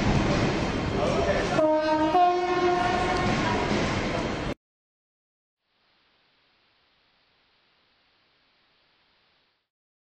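Digital radio blending to analogue, 5.56 to 9.72 s: digital reception failed, so the receiver cross-faded to AM, losing treble and adding faint hiss.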